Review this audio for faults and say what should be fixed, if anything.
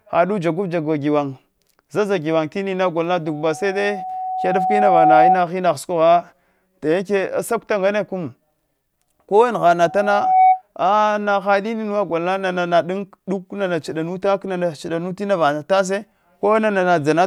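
Loudspeaker feedback squeal at 3.26–5.44 s and 9.80–10.62 s. A 748 Hz tone swells about 10 dB above the speech as the mic re-amplifies the loudspeaker. Reduce gain or reposition the mic away from the speaker.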